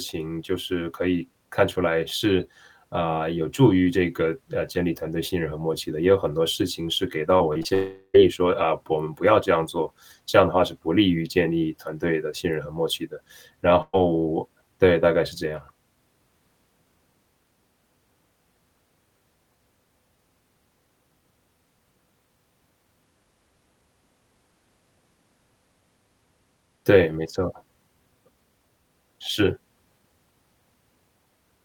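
From 7.37 to 7.72 s there is repeated packet loss, giving a robotic sound. Five short holes fall close together, the longest about 21 ms. Each is patched by stretching the sound just before it. About a quarter of this span is filled-in sound rather than real audio. The result is choppy, with small pieces missing.

Right after, from 7.74 to 8.16 s, the audio stops arriving. This is most likely a long network dropout. About 0.4 s of audio never plays. The last sound is carried on as a buzz or hiss that fades away. The final 50 ms or so are silent. The audio then resumes further on, and the lost stretch is simply gone.

At 13.82 to 13.95 s comes a burst of packet loss. About 120 ms of audio is missing. The receiver holds the last sound and turns it down as the gap goes on, so it fades into a brief buzz or hiss. The last 40 ms or so are silent. The audio then picks up later, skipping what was lost.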